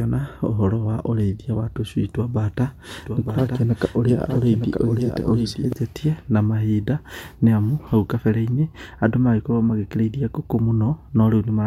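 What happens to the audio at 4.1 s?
At 4.1 s the speech is overlaid by a second, slightly quieter copy of itself trailing about a second behind, with no reverb or room colour. It begins abruptly at 2.99 s, just after "twa mbata", and cuts off cleanly at 5.73 s. This doubled audio track, sitting a few dB under the original, is likely caused by the signal being captured twice, once through a slower path, or by an edit leaving two offset copies.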